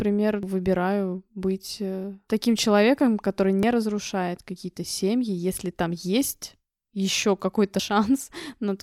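At 0.43 s, just before "выбираю быть э таким", there's a quick blip from damaged data in the compressed stream. It recurs at 3.63 s after "э таким человеком который" and at 7.79 s after "если там есть еще". Each time, the decoder hits corrupted bytes, loses frame sync and has to hunt for the next header.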